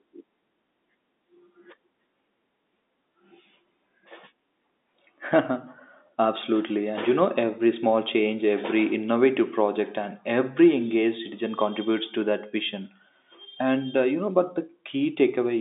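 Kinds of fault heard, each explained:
No faults are heard.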